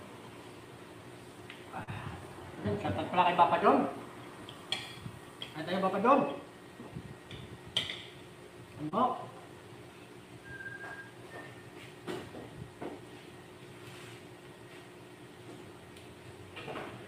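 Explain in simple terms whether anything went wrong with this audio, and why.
Short concealed packet loss at 1.83 s and 8.89 s: about 40 ms and 20 ms of audio arrived too late, so the receiver patched the gaps by extending the preceding sound, leaving brief smears.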